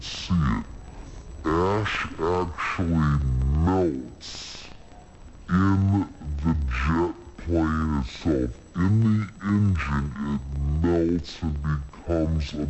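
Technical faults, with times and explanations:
Throughout, wrong sample rate: sound runs at half speed and a full octave low, which fits 44.1 kHz audio played back at 22 kHz without conversion.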